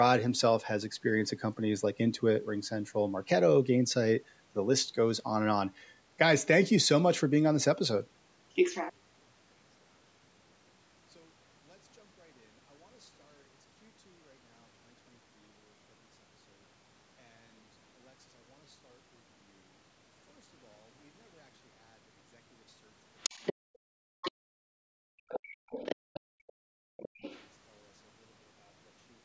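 From 8.90 s to the end, the speech collapses by about 37 dB when heard in mono, leaving only a faint residue. This is one channel inverted: likely one side's polarity is flipped, so the centred voice cancels.

From 23.20 to 23.54 s, 24.22 to 24.32 s, 25.29 to 26.52 s and 26.97 to 27.47 s a second voice intrudes. This is the other side's voice leaking through, likely loudspeaker echo the canceller missed. It sits about 10 dB below the speech, about 20 dB in the last stretch, and is separate from the room sound.

Between 23.54 and 27.21 s the room sound dips, by up to about 37 dB and for roughly 3 s in all. This is background gated by the echo canceller, which clamps the microphone while the far end plays. The ambience itself drops out, whereas a leak adds sound.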